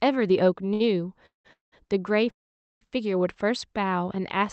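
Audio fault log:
0.73–0.82 s, short stall from a late packet: the sound at this point is held for about 66 ms longer than it should be, with a slight buzz or dip, and then the speech resumes exactly where it left off. None of the speech is lost. The jitter buffer ran dry while one packet was late, so the receiver stretched the last audio it had until that packet came in. That shifts everything after it 66 ms later.
1.26–1.47 s, 1.53–1.74 s and 2.30–2.83 s, call audio freeze: each event begins with a brief decaying buzz or hiss and then goes silent, for about 150 ms, 160 ms and 490 ms respectively. The total inserted durations are 185 ms, 194 ms and 511 ms. Speech picks up again from the point where it stopped, so no content is missing, but the timing is pushed back each time. The likely cause is packets held up in transit, which emptied the jitter buffer until they arrived. The band limit near 8 kHz, heard throughout, comes from the call codec path.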